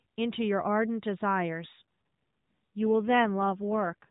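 From 1.74 s to 4.09 s the speech turns buzzier and more synthetic, an AMR rate drop that fits the narrowband codec falling from 12.2 to 5.9 kbps. A spectrogram shows no gap and the same 4 kHz ceiling, but blurrier, smeared harmonics.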